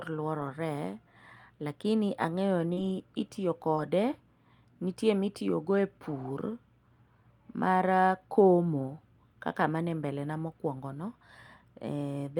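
At 0.39 to 0.49 s, a lost packet rebuilt from error correction: about 60 ms of speech came from the low-bitrate backup copy carried in the following packets, so there is no gap, but the sound turns grainy and noisy. On a spectrogram the harmonics blur. The same roughness returns at 2.77 to 2.91 s (about 80 ms), at 3.77 to 3.79 s (about 20 ms), and at 6.19 to 6.25 s, right after "nitie ma ipurogo e" (about 40 ms).

Just after "lakini ang'eyo", at 2.73 to 2.79 s, a short concealed packet loss: about 40 ms never arrived in time, and the decoder filled roughly 34 ms of it by extending the preceding sound before blending back into the real audio. It is heard as a brief smear or wobble. A shorter loss of the same kind at 3.75 to 3.79 s left about 20 ms missing.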